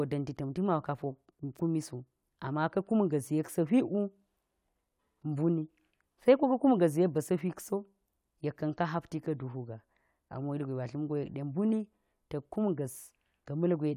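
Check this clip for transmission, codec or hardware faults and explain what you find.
No faults found.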